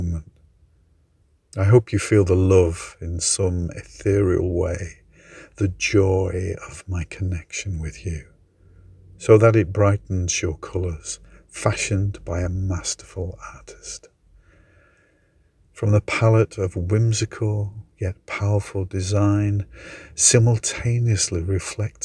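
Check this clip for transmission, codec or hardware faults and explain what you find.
No transmission, codec or hardware faults.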